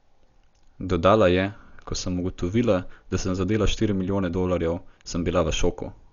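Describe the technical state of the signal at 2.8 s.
At 2.8 s, as across the whole clip, the speech is heavily damaged, likely by Dolby Digital compression at a low bitrate fitting about 48 kbps. With nothing above 7 kHz, it sounds dull, with rough, fluttering noise.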